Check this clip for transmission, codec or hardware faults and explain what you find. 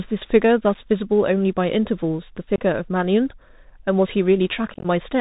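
Two problems here: the whole clip went through a Bluetooth CVSD headset codec, and there are three spots of unconcealed Bluetooth headset packet loss.

The CVSD damage is plainly audible from start to finish. Everything above 4 kHz is gone, which gives that boxed-in phone-call sound, and it fits a 64 kbps CVSD link. The codec sends one bit per sample to say whether the signal is going up or down, and the step size adapts as it goes. It can't keep up with loud, bright sounds, so the s sounds come out scratchy and there's a grainy hiss sitting under the speech.

The packet losses come from voice packets between the headset and the phone going missing, with nothing rebuilt to cover the gap. At 0.74 s a single packet drops, a short hole of about 7.5 ms. From 2.56 to 2.58 s a few packets go, about 22.5 ms, which makes a short, hard-edged dropout. From 4.74 to 4.86 s roughly ten packets are lost, about 67.5 ms in total, scattered across 105 ms with the longest run at 15 ms. 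That one sounds like crackle, with the speech chopped up over that stretch.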